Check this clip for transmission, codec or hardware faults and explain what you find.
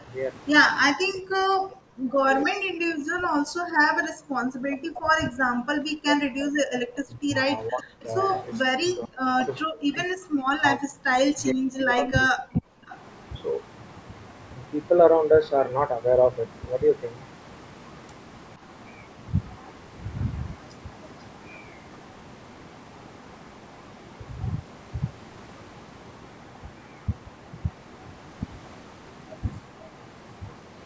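Two call-path faults are present, and both point to echo-canceller trouble during overlapping talk.

Speech suppressed in double talk occurs at 0 to 0.09 s, 0.93 to 7.33 s, 7.68 to 8.06 s and 8.65 to 12.83 s. The speech dips, thins and drops out in pieces. The two long stretches fall by up to about 40 dB. The brief ones fall by only about 10 to 15 dB. The likely cause is a canceller that couldn't tell the near talker from loudspeaker echo. It turned everything down.

Echo leak appears at 7.78 to 7.83 s, 8.2 to 8.41 s, 12.02 to 12.21 s and 12.55 to 12.98 s. Copies of the sound return late. The first pair trails by 466 ms at roughly 25 to 30 dB down. The second pair trails by 490 ms and is stronger, from about 10 to 20 dB down. This is likely a loudspeaker's pickup slipping past the canceller and being sent back. The call's band-limited processing, with nothing above 8 kHz, is a normal feature and not a fault.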